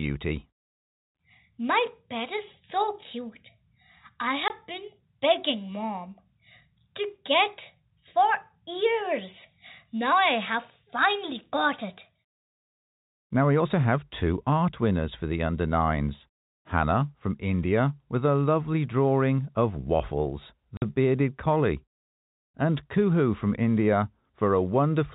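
Packet loss filled with silence opens a 20 ms hole at 4.48 to 4.50 s, just before "been begging mom", and a 50 ms gap at 20.77 to 20.82 s, before "bearded collie". Missing packets were replaced with silence, which fits 10 ms packets, so the speech drops out abruptly with hard edges.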